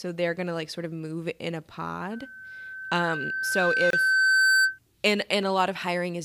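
From 2.11 s to 4.79 s there's loudspeaker feedback squeal: the mic hears its own speaker, and a 1.5 kHz tone swells over roughly two seconds to about 10 dB above the speech. Later in it, at 3.90 s, a 27.8 ms gap at a join of encoded pieces breaks into the sound, where separately encoded chunks were spliced without trimming their padding.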